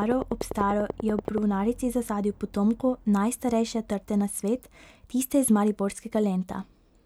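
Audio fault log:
0.02 to 1.39 s, train of clicks: a steady ticking of about 10.3 clicks per second, roughly fifteen in all, each much the same shape and standing around 10 dB above the speech. The even spacing points to likely interference from nearby equipment or a faulty connection or power supply.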